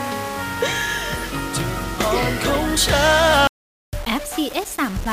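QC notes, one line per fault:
Throughout: low bit depth without dither, the audio likely reduced to about 5 bits by rounding, so quantisation error tracks the signal as grainy distortion roughly 20 dB below it; the waveform shows visible stair-steps, and the spectrogram shows signal-correlated hash spreading upward.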